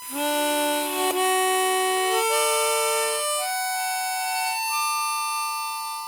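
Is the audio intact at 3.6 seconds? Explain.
No, a steady 1 kHz whine sits about 15 dB under the sound throughout the clip: USB whine, from the bus's 1 ms frame current leaking through power or ground.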